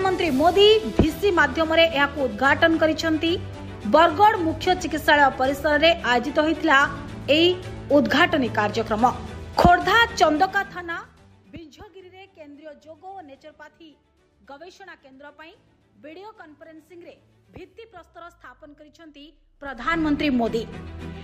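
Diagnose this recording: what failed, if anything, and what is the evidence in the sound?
Zipper noise appears from 19.52 to 20.0 s, at the driver or buffer stage where gain is applied. The level moves by roughly 25 dB in 2 dB steps, about 30 a second. Each unsmoothed step clicks, so a ticking zip rides on the sound during the move.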